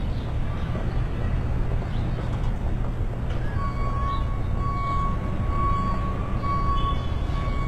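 A low-bitrate HE-AAC compression stage likely sits in the chain for the whole clip, coding only the lower spectrum and synthesising the treble from copied lower bands. The damage is plainly audible from start to finish: the upper range sounds bright but artificial, with a gritty, metallic sheen where its harmonics fail to line up with those below, and nothing reaches above about 12.3 kHz. The strain suggests a bitrate near 16 kbps.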